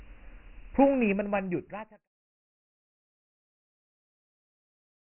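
The speech carries Dialogic VOX ADPCM coding from start to finish. Heavy 4-bit quantisation leaves a gritty hiss trailing the speech. Nothing sounds above 3.1 kHz, which points to 24 kbps at 6,000 samples a second. The level fades smoothly out from around half a second to 2.09 s.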